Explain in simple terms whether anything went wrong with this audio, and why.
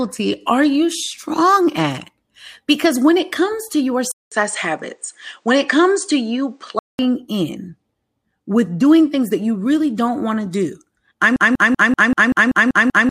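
Two things go wrong. Right after "it comes to your", at 4.12 s, the sound drops out for about a fifth of a second, then turns duller and boxier, with nothing above 9.2 kHz and a faint new background noise, until 6.99 s. That is likely an input switched to a poorer device, a lower-quality microphone that can't carry the crisp high end.

Later, just after "want to do I'm", at 11.36 s, a 0.19 s scrap of sound starts repeating back to back, nine times, until the clip ends. This broken-record loop likely comes from the player or stream stalling and resending its last fragment, so the real audio there is lost.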